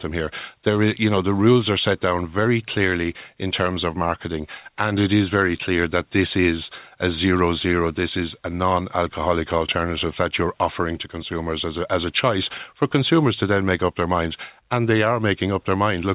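Nothing goes wrong anywhere in this speech, which came over a call link whose content stops at about 4 kHz, in line with a narrowband G.711 A-law path at 64 kbps.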